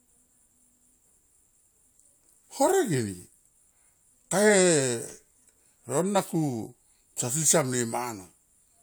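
Listening to the speech recording, nothing stood out as a technical problem at any point.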